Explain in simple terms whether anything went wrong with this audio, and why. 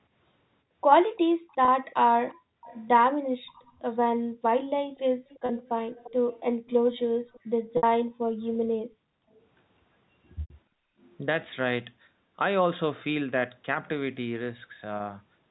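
Three things went wrong. First, an echo leak. From 1.16 to 3.62 s and 4.97 to 8.56 s, a faint copy of the speech trails about 0.35 s behind. A loudspeaker's sound likely slipped back into a microphone.

Second, packet loss with pitch repetition. Bits of audio went missing at 1.65, 5.46, 7.77, 10.41 and 14.97 s. The receiver filled each gap by repeating the last sound, causing brief buzzy holds at the short gaps and a fade into silence at the longer ones at 7.77 and 10.41 s.

Third, background gated by the echo canceller. The room sound suddenly drops away from 2.34 to 4.43 s, 6.54 to 6.66 s, 8.09 to 9.39 s, and 10.67 to 10.98 s. The canceller muted the microphone, then released it.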